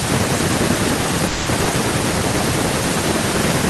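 From the first word to the last, every phrase is trailed by a quieter, thinner copy arriving around a fifth of a second later, at about 12 dB below the direct sound. This is echo with no canceller: the far end's loudspeaker feeds back into its microphone and the call returns it after the network round trip. It differs from room reverberation because the repeat is a distinct delayed copy rather than a smooth tail.

From 1.27 to 1.49 s the sound stops moving forward and the last moment is stretched into a fading buzz for about 190 ms, with no true silence. This is a call audio freeze, likely from delayed packets draining the jitter buffer. Playback then resumes exactly where it stopped, so nothing is lost and the phrase simply arrives late. That sets it apart from a dropout, which removes material.

Between 1.64 and 1.68 s there is the opposite fault, a skip ahead. Roughly 70 ms of audio is missing, and the material on either side is butted together with only about 10 ms of fill. 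The sound lurches forward, with no pause or buzz. It probably catches up some of the delay the freeze introduced, whereas a freeze adds a gap and loses nothing.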